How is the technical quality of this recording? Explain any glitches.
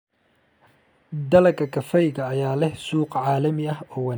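The recording has one fault, a USB whine. From 1.4 to 3.4 s, current drawn in 1 ms bus frames leaks into the audio path, adding a faint, fixed-pitch 1 kHz whine, strongest at 4 kHz, roughly 45 dB below the speech.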